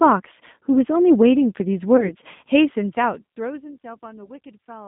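Throughout the speech, the G.729 codec is plainly audible. The band runs only from about 150 Hz to 3.6 kHz, and the pulse-based excitation makes the voice rough and slightly synthetic, which fits an 8 kbit/s G.729A link.

From 1.97 to 2.11 s, packet loss concealed by the speech codec appears. About 20 ms of audio, consistent with one lost packet, is replaced by the decoder's extrapolation. It stretches into a brief sound that fades, and the voice stays weakened for roughly 0.1 s afterwards while the decoder recovers.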